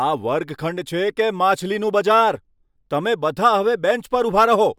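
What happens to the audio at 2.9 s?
Nothing goes wrong at 2.9 s; the speech there plays through intact, with no dropout, click or distortion at that moment.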